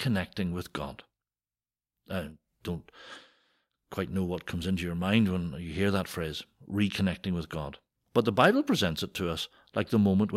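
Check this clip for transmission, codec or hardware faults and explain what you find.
I found no faults in this clip to explain.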